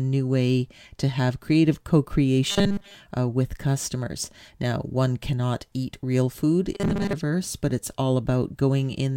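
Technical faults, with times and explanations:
2.50–2.95 s and 6.74–7.14 s, robotic sound from repeated short buffers: the speech collapses into a rigid metallic buzz fixed at 200 Hz. The likely cause is a 5 ms buffer looped over most of each stretch while fresh audio is skipped. Unlike a stutter, the repeats are too short to hear separately.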